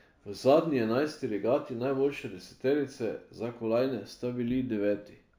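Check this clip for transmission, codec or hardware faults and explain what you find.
One fault runs through the whole recording: imaging from linear upsampling, present from start to finish. The speech appears to have been raised from a 16 kHz rate to 44.1 kHz by joining samples with straight lines. That interpolation filters poorly, so it dulls the top of the original band and leaves a faint mirrored copy of the spectrum between 8 kHz and 16 kHz, roughly 40 dB below the speech. It comes through as a thin metallic shimmer on sibilants.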